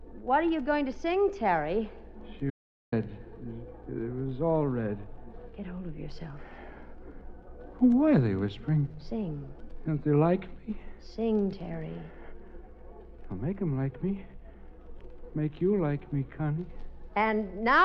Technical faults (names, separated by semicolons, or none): audio dropout to silence